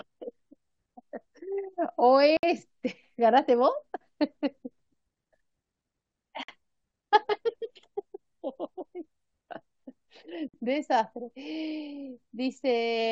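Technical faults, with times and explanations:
2.37–2.43, 6.43–6.48 and 10.48–10.54 s: gap at a join of encoded pieces. Silences of 61, 53 and 53 ms open about every 4.0 s, where separately encoded segments meet with their start delay and end padding left in. The speech resumes where it stopped, with nothing missing, unlike a dropout.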